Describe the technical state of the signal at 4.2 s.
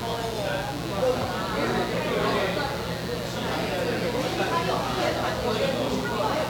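At 4.2 s, mains buzz runs under the sound, as it does throughout. Spikes twice per 60 Hz cycle spread harmonics into the kilohertz range, giving a steady, raspy buzz about 10 dB below the signal.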